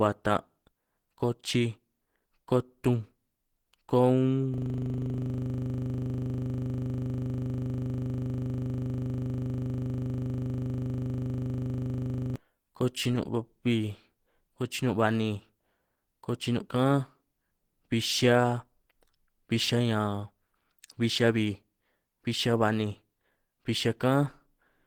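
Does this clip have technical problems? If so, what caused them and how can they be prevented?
Yes. Throughout, the speech sounds muffled, hoarse and grainy, likely from Opus compression at a low bitrate around 16 kbps, which pushes the encoder into its hybrid speech mode. Using a higher bitrate, such as 32 kbps or more, would prevent it.

From 4.54 to 12.36 s, a system hang loop occurs: the computer stalled while the audio hardware kept replaying one 40 ms buffer, producing a rough 25 Hz buzzing stutter. Preventing it means fixing the driver or system stall, or having the audio path output silence instead of recycling stale buffer contents when no new data arrives.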